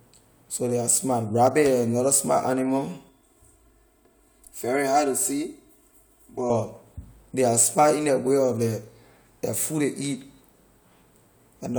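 From 3.09 s to 6.50 s the speech turns hollow and phasey, as if heard through a tube, and then returns to its full tone. This is channel delay causing comb filtering. One channel runs late by around 3 ms, and when the two are summed to mono the shared content cancels at evenly spaced frequencies. The first notch falls somewhere near 150 Hz and the others repeat at regular steps above it, thinning the body and colouring the upper range.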